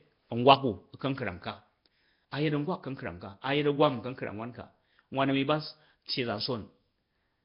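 From start to finish the speech has a rough, hissy halo and a smeared, underwater blur, with nothing above 5.3 kHz. It is likely Nellymoser compression at a rate near 22 kbps. Unlike the chirpy swirl of low-rate MP3, the grain is steady noise filling starved bands.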